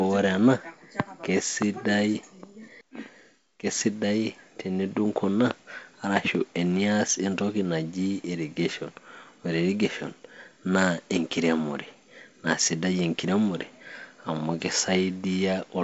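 No technical faults are audible.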